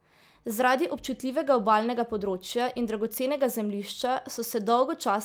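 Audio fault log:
No faults are heard in the speech. The log has no entries for this clip.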